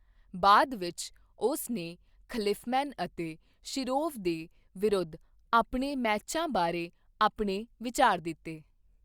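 No technical faults can be heard anywhere in this speech recording. There is nothing to point to at any moment along its timeline.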